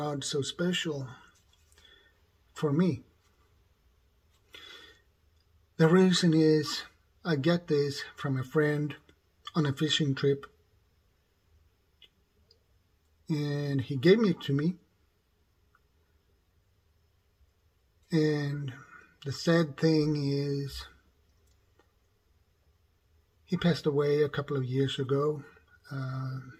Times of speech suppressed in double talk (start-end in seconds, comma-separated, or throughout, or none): none